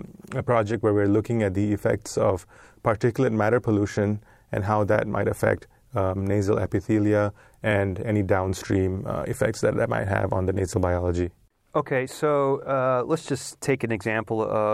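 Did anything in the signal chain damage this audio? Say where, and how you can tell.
No, nothing in the signal chain damaged this speech.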